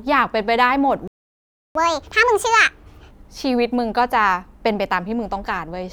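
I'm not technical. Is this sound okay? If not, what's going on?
No. At 1.08 s the speech cuts out and there is silence until 1.75 s, about 0.68 s. This is a playback stall: the player most likely ran short of incoming audio or was briefly held up, so nothing came out.

From 1.75 s to 3.11 s the speech runs at 1.5 times normal speed and sounds raised in pitch by roughly seven semitones. This is catch-up at higher speed: the player rushes through the audio it fell behind on, then returns to normal.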